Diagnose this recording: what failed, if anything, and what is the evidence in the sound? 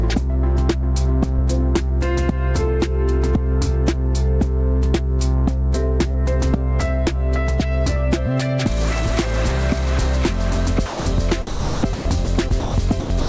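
A short concealed packet loss sits in the network and jitter-buffer stage, at 6.12 to 6.16 s. About 20 ms of audio never arrived in time. The decoder extended the preceding sound to cover the hole and then faded back into real audio. It is heard as a brief smear or wobble. The path runs through G.722, with nothing above 8 kHz, which fits a 64 kbps call.

From 10.86 to 11.06 s, the sound drops out for 200 ms and steady comfort noise takes its place. This is likely sound dropped by the voice detector in the sender's call processing. The detector judged the signal to be background and stopped transmitting. The receiver generated synthetic noise until the detector triggered again. The real sound in that window is gone, not concealed.

Sound is chopped by the voice detector twice: from 11.47 to 12.74 s, and from 13.0 s to the end. The likely cause is the detector gating on and off repeatedly. 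In the first stretch, about 650 ms of the 1.27 s is comfort noise. In the second, about 190 ms of the final 0.28 s is. The sound breaks up.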